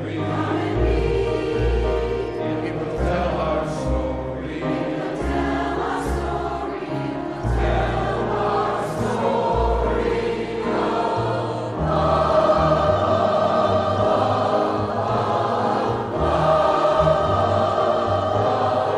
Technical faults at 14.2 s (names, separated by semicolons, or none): none